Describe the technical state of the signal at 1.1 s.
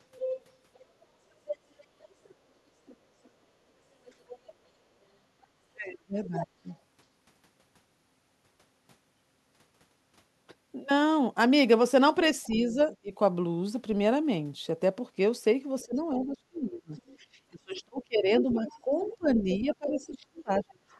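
Other side's voice leaking through runs from 0.17 to 6.76 s, so it covers 1.1 s. A second voice sits roughly 10 dB below the main speech, most likely the far end playing from the talker's loudspeaker and getting past an incomplete echo canceller.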